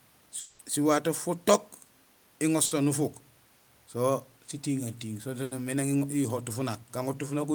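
A long network dropout at 0.39 to 0.61 s opens this speech clip. For about 200 ms the sound is held over as a buzz or hiss that fades and never falls to full silence, and the speech resumes further on with that stretch gone. This is likely a gap in arriving audio that the receiver papered over by extending the last sound. Bursts of packet loss follow at 2.65 to 2.73 s and 5.43 to 5.53 s, with each gap covered by about 60 and 80 ms of continued, fading sound respectively. In both, a run of audio failed to arrive in time, so the receiver carried the preceding sound forward while lowering its level, and playback picks up after the missing piece.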